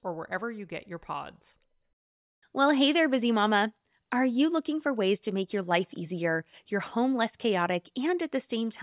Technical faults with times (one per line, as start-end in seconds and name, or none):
none